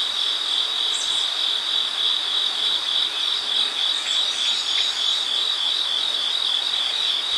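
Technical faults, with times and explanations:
Throughout: Vorbis compression. Nothing sounds above 14.2 kHz, and the treble is hissy and grainy. This likely comes from a low bitrate, around 35 kbps.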